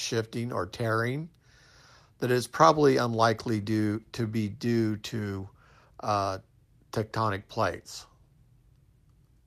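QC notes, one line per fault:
No technical faults are audible in this speech recording, with no dropouts, distortion or timing disturbances.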